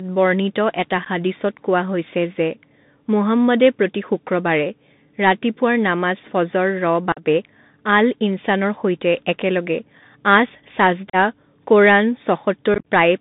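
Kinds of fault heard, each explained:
Bluetooth CVSD headset codec, throughout the clip: the speech is squeezed into a telephone band of roughly 150 Hz to 3.7 kHz, which fits a 64 kbit/s CVSD headset link. That coder sends a single up-or-down bit per sample with an adapting step, so it cannot track fast, loud high-frequency movement. The result is plainly audible damage: a gritty granular hiss under the voice, scratchy s sounds, and distortion where the speech outruns the step size.
Unconcealed Bluetooth headset packet loss, at 1.05–1.07 s, 7.12–7.22 s, 11.10–11.16 s and 12.74–12.84 s: short stretches of the voice stream between headset and phone never arrived and were replaced by silence or an idle pattern rather than patched over. About 15, 45 and 37.5 ms drop out in the first three events, leaving abrupt holes. The last spreads roughly 82 ms of loss over about 120 ms, with its longest gap at 45 ms, so it sounds choppy and crackly.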